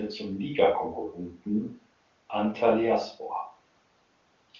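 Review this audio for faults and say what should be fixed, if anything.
No faults heard; nothing here needs fixing.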